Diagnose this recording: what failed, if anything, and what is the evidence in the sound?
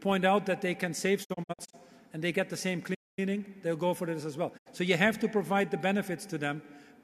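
Digital broadcast dropout at the receiver: from 1.23 to 1.75 s the sound breaks into short muted holes, longest 48 ms, about 216 ms lost; another 72 ms hole at 4.57 s.

Playback stall: the sound stops dead at 2.94 s for about 230 ms before carrying on, likely the player running dry or its thread blocking.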